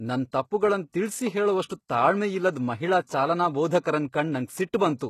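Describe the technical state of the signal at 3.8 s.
At 3.8 s the speech carries plainly audible codec damage, with nothing above 12.3 kHz. It is likely HE-AAC compression, at a rate that fits about 16 kbps, which rebuilds the treble from copied lower bands instead of the original, so harmonics above the crossover don't line up. This lasts the whole clip.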